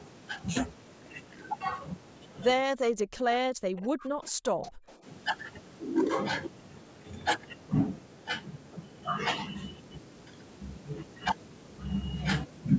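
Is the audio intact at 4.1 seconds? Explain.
No. Speech suppressed in double talk spans 2.66 to 5.05 s, which covers 4.1 s. With both sides talking, the echo canceller likely mistook the talker for loudspeaker echo and turned it down. The speech sinks by up to about 40 dB, nearly vanishing.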